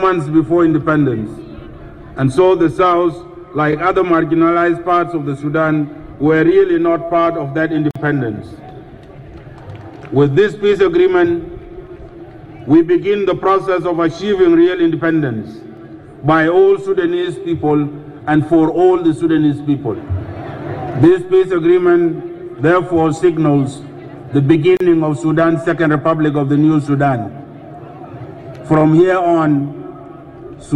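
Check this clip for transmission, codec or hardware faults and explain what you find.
Two short dropouts come from a gap at a join of encoded pieces, at 7.91 s and 24.77 s. The audio was encoded in separate segments and spliced without trimming, so each join keeps the encoder's start-up delay and the padding of the previous segment's final frame as dead air. The result is a gap of about 46 ms at the first join and 34 ms at the second, cut into continuous sound with softened edges, after which the sound resumes exactly where it left off.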